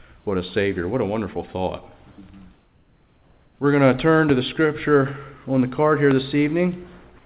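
At 2.12 s the sound is briefly cut short by the voice detector: for about 60 ms, to 2.18 s, the real signal gives way to a steady hiss. Roughly 40 ms of actual sound is missing. The sender's detector likely judged a quiet stretch to be background and stopped transmitting, so the receiver inserted comfort noise until detection resumed. The result is a small clipped gap rather than a clean pause.

From 2.54 s to 3.59 s, a span of about 1.05 s, comfort noise replaces the background. The pause is filled with a smooth, featureless noise sitting about 39 dB below the loud passages and about 1 dB lower than the real background around it. Any texture in the room tone disappears for that second. This is consistent with discontinuous transmission: the sender goes quiet between active passages, and the receiver synthesises noise shaped roughly like the background, giving a flat bed with no detail until the live signal returns.

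Two loud pops follow, one at 4.29 to 4.32 s and one at 6.11 to 6.14 s. Each is a single sharp transient lasting under 30 ms. The first peaks roughly 10 dB above the surrounding signal and the second roughly 15 dB above it, so the later one is stronger. The sound continues underneath both. The cause is likely a sudden voltage step or pulse, from a connector, switch or driver glitch, entering the chain. Everything is heard through the G.711 call path, with nothing above 4 kHz.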